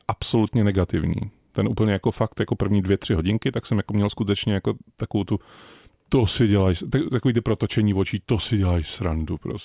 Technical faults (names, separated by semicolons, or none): none